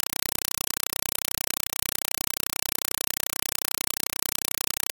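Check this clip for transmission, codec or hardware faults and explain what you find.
Throughout the speech clip, a compressed stream is played as audio. An AC-3 (Dolby Digital) bitstream is treated as samples instead of being decoded, so each frame becomes a 4 ms noise burst followed by zero padding, 31.25 times a second. This is heard as loud, chattering static in place of speech.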